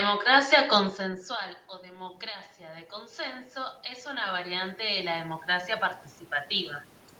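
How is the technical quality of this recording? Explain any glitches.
The recording has one glitch: automatic gain rising from 1.81 to 5.77 s, just after "consensual o". After the input dropped by about 20 dB, the gain control slowly added about 13 dB, so voice and room noise swell up together.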